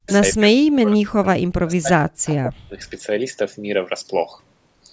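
In this speech clip, the talker's level collapses, dropping by around 40 dB, from 0.0 to 0.1 s, 0.34 to 2.27 s and 2.43 to 2.8 s. This is likely speech suppressed in double talk: the echo canceller mistook overlapping speech for loudspeaker echo and attenuated it.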